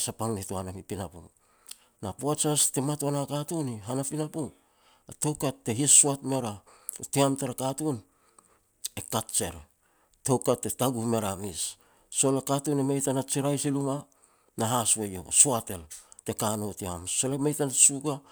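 No technical faults can be heard anywhere in the recording.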